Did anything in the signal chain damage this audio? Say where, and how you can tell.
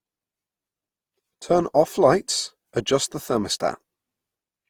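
Yes, at the codec stage. Throughout, the speech is swirly, hollow and smeared, with blurred attacks, worse than one 48 kbit/s Opus pass gives. This is likely generation loss: around four re-encodes, each requantising on a shifted frame grid.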